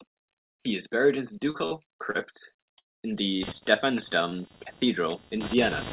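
Short concealed packet loss occurs at 1.50 to 1.56 s and 1.66 to 1.73 s, both just after "is buried in the", and again at 2.11 to 2.16 s. Each time about 40 ms of speech failed to arrive, and the receiver patched the hole by extending the preceding sound, leaving a brief smear or wobble.

A long network dropout at 2.78 to 3.04 s is the likely cause of a quarter-second hole. The concealment fades almost immediately into about 0.2 s of silence, and the speech resumes with that stretch missing.

Computer activity noise begins at 3.42 s and runs to the end: a buzzing of roughly 300 pulses per second, at about 10 dB below the speech. It comes from the machine's activity disturbing the audio ground, so it does not follow the speech. Two more short concealed packet losses fall inside it: one at 3.58 to 3.63 s, right after "in the", and a shorter, roughly 20 ms one at 4.29 to 4.33 s. Both are heard as brief smears or wobbles within the 4 kHz-limited telephone band.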